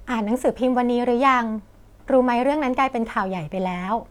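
No technical faults can be heard anywhere in the recording.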